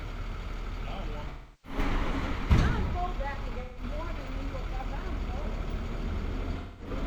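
An everyday sound recording with AAC frame loss and concealment in three places. The gaps fall at 1.29 to 1.78 s, 3.60 to 3.83 s and 6.58 to 6.90 s. The lost audio runs about 341 ms, 171 ms and 213 ms. In each gap the decoder rebuilds the sound from the last good spectrum. The result is a smeared, noisy or phasey patch. The first and longest gap fits about eight missing frames.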